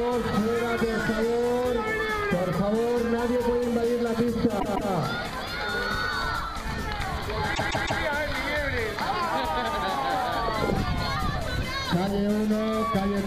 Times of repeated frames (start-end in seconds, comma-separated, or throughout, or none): 4.59-4.90, 7.54-8.01